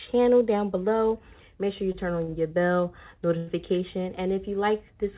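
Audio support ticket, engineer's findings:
Short stalls from late packets at 1.92–1.96 s, 2.24–2.30 s, 2.30–2.34 s and 3.37–3.49 s: sound held and stretched by 22, 37, 25 and 96 ms. Jitter buffer underran, and the receiver extended the last audio until each late packet arrived. Nothing skipped. The longest hold is at 3.37 s. Band-limited to 4 kHz through the WebRTC call path.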